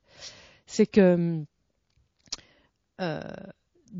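MP3 compression damage runs through the whole clip, from start to finish, and is plainly audible on this speech. The sound points to a low bitrate encode, which fits roughly 32 kbps, likely from an MP3 encoder starved of bits. With so few bits, the treble is cut off at a fixed frequency and quieter spectral detail is dropped, returning unevenly from frame to frame. That leaves the speech dull, watery and swirly, with chirpy s sounds and smeared consonant onsets.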